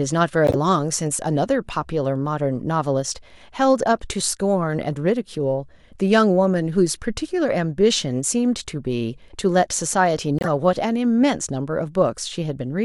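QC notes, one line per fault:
0.47–0.56 s, corrupt frame decoded: a harsh, loud burst. Damaged bits in a few consecutive compressed frames were decoded as if valid, so misread gains and codes sprayed energy into the wrong frequencies.
10.39–10.48 s, corrupt frame decoded: a quieter blip, around -10 dBFS. It spans roughly three frames of misdecoded spectral data.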